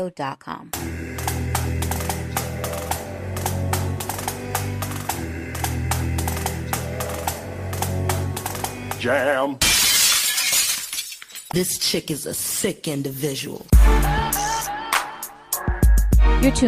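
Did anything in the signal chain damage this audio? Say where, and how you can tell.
Yes. At 9.77 s the call's bandwidth estimate collapsed and the codec was pushed into a call bitrate drop, which fits a fall from 128 kbps to 25 kbps, bottoming out for 3.62 s. From there to the end the audio loses its top end and turns coarse and watery.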